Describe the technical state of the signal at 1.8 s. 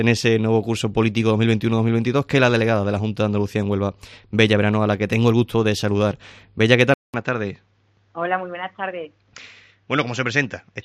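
At 1.8 s the signal is intact, with no dropout, distortion, glitch or other audible fault present at that moment.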